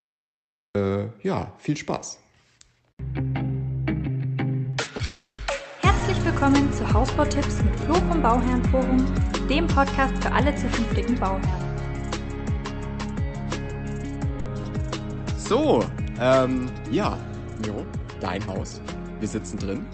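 The first 0.75 s is digital silence, and then the sound begins abruptly at 0.75 s, already mid-sound. This is a cut-off start: capture began late, so there is no attack or fade-in. Unlike a dropout, nothing precedes it, and the entry itself is the hard edge.

Between 4.63 and 6.03 s come scattered short gaps. There are about four of them, the longest about 30 ms, and together they are patched with roughly 70 ms of continued sound. Each is heard as a brief tick or smear rather than a hole. Because they are isolated single losses, the flow never stops for long.

Within that stretch, from 5.05 to 5.41 s, a call audio freeze sets in. The last sound is stretched into a fading buzz or hiss over about 330 ms, including roughly 130 ms of silence. The sound then resumes exactly where it halted, so nothing is lost, only delayed. This points to late packets draining the jitter buffer, likely. That separates it from a loss burst, where material disappears.

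At 14.40 to 14.49 s a burst of packet loss leaves a 60 ms held, decaying tail. When the sound returns, it has skipped ahead by those 60 ms, so the passage is missing rather than paused. The jump forward is what marks it as loss rather than a freeze.

From 16.92 to 18.73 s a jitter buffer speed-up plays the sound about 13 percent fast. Roughly 200 ms is trimmed away in many tiny pitch-period cuts, so it sounds hurried while the pitch stays put. That steady pitch distinguishes it from a simple resampling speed change. Throughout, the Opus call path limits the top end to about 8 kHz.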